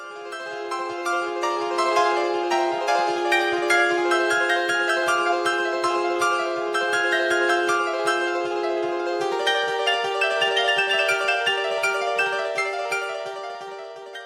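The whole clip plays back at twice its proper speed and a full octave (12 semitones) too high, and it stays that way from start to finish. That's the classic audio read two samples at a time fault: the reader treats each pair of samples as a single frame, as if the stream were stereo or used wider samples, so everything rushes by.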